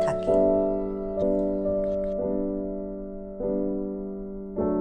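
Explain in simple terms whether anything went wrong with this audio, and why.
Yes, something went wrong. At about 1.21 s the audio has compressed frames skipped. A chunk of the encoded file was either missing or rejected by the decoder as damaged, so it was never played. The sound jumps ahead by roughly three tenths of a second, which fits about fifteen frames of around 23.2 ms each.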